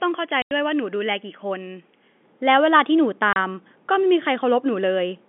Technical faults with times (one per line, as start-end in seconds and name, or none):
0.00-2.23 input switched to a poorer device
0.42-0.51 packet loss filled with silence
3.33-3.36 packet loss filled with silence